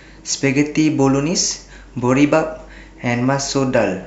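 Nothing in this recording stands out as a technical fault; the speech simply runs its course without any glitch or interruption worth pointing to.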